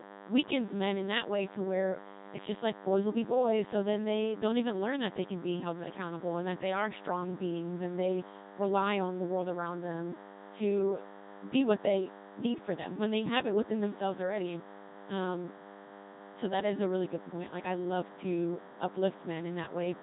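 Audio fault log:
throughout, DECT cordless phone buzz: a thin, steady buzz at 100 Hz with a dense stack of harmonics sits about 20 dB below the speech. A nearby DECT handset or base emits a radio burst every 10 ms, and the audio circuitry rectifies each burst into the signal.
throughout, Codec 2 vocoder: heavily damaged speech with a robotic, buzzy texture and no content above 3.8 kHz. The original waveform is gone. The decoder rebuilds the voice from sine waves driven only by pitch, voicing, energy and a coarse spectral envelope, which fits a low-rate 2.4 kbit/s mode.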